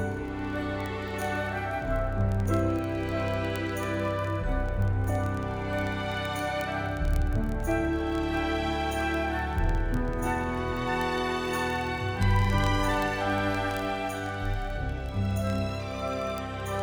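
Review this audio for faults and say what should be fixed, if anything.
Word clock ticks run from 0.12 s to 16.82 s: sharp, uneven clicks roughly every 30 ms, hundreds in all. The receiver is free-running against the digital source, and their clocks disagree by something like 700 ppm. Each slip misreads a few samples and seems to drop or repeat one. To prevent it, lock the receiving device to the incoming digital signal or to a shared master word clock.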